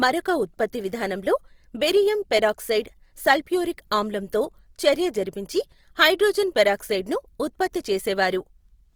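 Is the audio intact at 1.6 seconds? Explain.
No. Throughout this speech, the sound is grainy and rough, likely from Opus compression. At a low bitrate, near 24 kbps, thin bands get filled with noise.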